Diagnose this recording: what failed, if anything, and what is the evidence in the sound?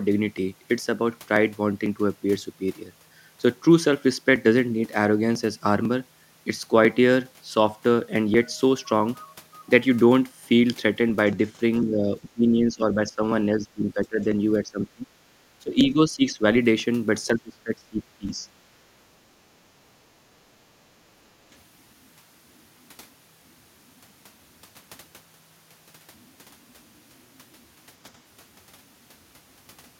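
A small tick sounds every 0.5 s from 0.38 s to 29.73 s, about 70 in all, each a skip of roughly 2 ms. These are periodic USB or driver dropouts at the driver or buffer stage: something stalls the audio path on a fixed cycle, and the missing samples are simply skipped.

Between 11.81 and 18.46 s the speech dips and thins in five stretches: 11.81–13.22, 13.59–14.27, 14.62–15.05, 15.61–16.42 and 17.27–18.46 s. The drops range from about 10 dB to about 25 dB. This is likely speech suppressed in double talk, in the call processing, while the far side was also talking.

From 20.35 to 20.54 s the room tone briefly sinks by about 8 dB, for roughly a tenth of a second, and then recovers. This is background gated by the echo canceller in call processing: it clamped the microphone while loudspeaker playback was active, then released it.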